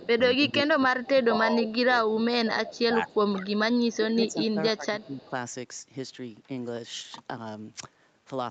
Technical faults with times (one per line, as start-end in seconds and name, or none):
0.00-3.60 speech suppressed in double talk
3.77-3.95 echo leak
3.95-5.33 speech suppressed in double talk
5.00-5.26 echo leak